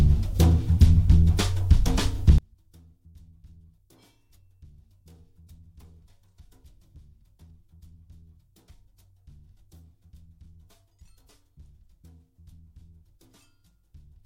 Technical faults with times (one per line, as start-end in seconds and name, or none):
2.38-14.25 one channel inverted